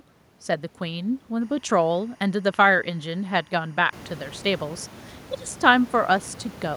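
Linear timecode from a neighbouring track or cable leaks into the speech from 1.41 s to 4.63 s. This timecode bleed switches between tones near 1 and 2 kHz, which fits 23.976 fps code, giving a faint chirping warble roughly 35 dB below the speech. The room noise rises at around 4 s.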